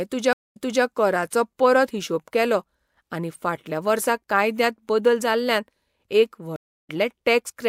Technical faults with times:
0.33-0.84 stream reconnect
6.56-6.90 stream reconnect

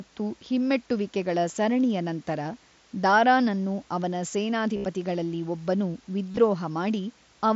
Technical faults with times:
4.77-4.84 concealed Bluetooth headset packet loss
6.32-6.37 concealed Bluetooth headset packet loss

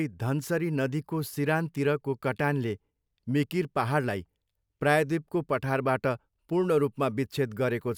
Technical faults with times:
none

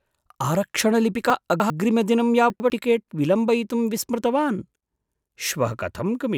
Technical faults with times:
1.30-1.70 chunks out of order
2.50-2.70 chunks out of order

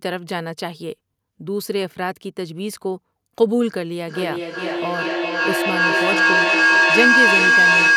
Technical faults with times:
4.08-7.96 feedback howl

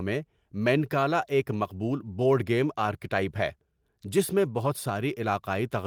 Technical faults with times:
none

